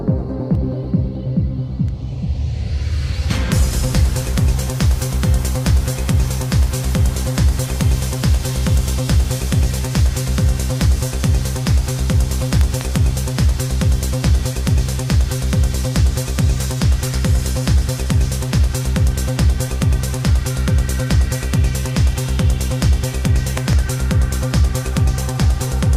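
A double pop stands out above the audio twice, at 12.61 to 12.83 s and again at 23.58 to 23.75 s, the first peaking roughly 15 dB over the signal and the second about 10 dB, with the sound continuing beneath. These loud pops likely come from sudden voltage pulses, such as a plug, switch or static discharge.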